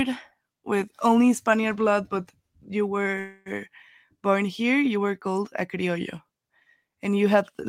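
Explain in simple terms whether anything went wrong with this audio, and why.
A call audio freeze happens at 3.19 to 3.49 s. The speech stops and the last sound is stretched into a fading buzz for about a quarter of a second, likely because network packets arrived late. Then the speech resumes where it paused, with nothing lost.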